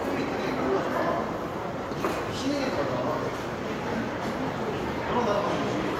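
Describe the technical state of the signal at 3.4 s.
At 3.4 s the signal is intact, with nothing audible there that points to a fault in the sound.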